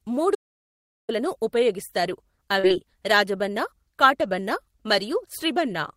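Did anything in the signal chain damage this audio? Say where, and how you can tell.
Yes. Audio dropout to silence at the input, likely a lost link before the recorder: 0.35 to 1.09 s is silent, with no room tone.

Short concealed packet loss on the network path, 2.59 to 2.67 s: about 40 ms went missing, and the decoder's extrapolated fill leaves a brief smear.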